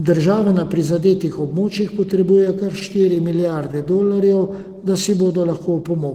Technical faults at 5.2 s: jitter buffer slow-down

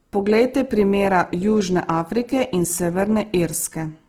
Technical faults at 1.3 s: Opus compression

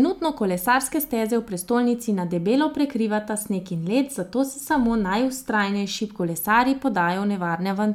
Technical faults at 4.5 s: none

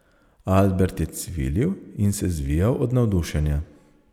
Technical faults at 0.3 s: none

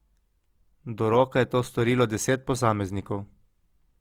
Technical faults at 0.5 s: Opus compression

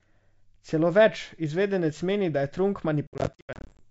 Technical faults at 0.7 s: none

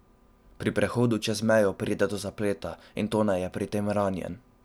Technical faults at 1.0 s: none

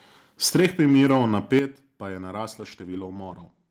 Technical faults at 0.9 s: microphone overload

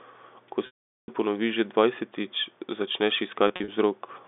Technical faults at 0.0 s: none

